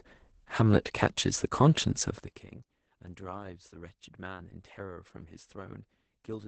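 Throughout the speech, Opus voice compression is heavy. Nothing is present above about 8.8 kHz, consistent with SILK coding in wideband mode, and the coarse excitation makes the voice sound muffled, hoarse and slightly robotic. That degree of damage points to a low bitrate of around 10 kbps, where the linear-prediction coder has too few bits to describe the fine structure of the voice and the band is narrowed to save space.

From 2.14 to 2.53 s, zipper noise appears as the level drops by roughly 20 dB. Instead of gliding down, the gain falls in 1 dB steps at about forty per second with no smoothing between them. Each jump puts a small discontinuity into the waveform, so the fade carries a rapid ticking, zipping texture for those four tenths of a second.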